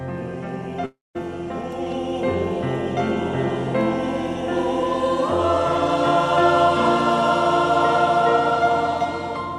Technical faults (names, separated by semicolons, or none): long network dropout